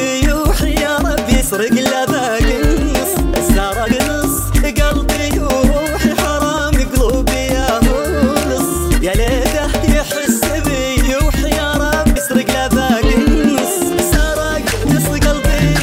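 The audio skips forward abruptly three times: at 3.92 s, roughly 40 ms is missing, and at 9.64 s and 12.16 s, roughly a tenth of a second is lost each time. These jumps are likely a dropped buffer (overrun), where the capture software fell behind and the hardware overwrote unread samples, splicing the remaining audio together. On a waveform, each jump appears as a sudden discontinuity with no silent gap. On a spectrogram, it appears as a sharp vertical seam where the pattern changes without transition.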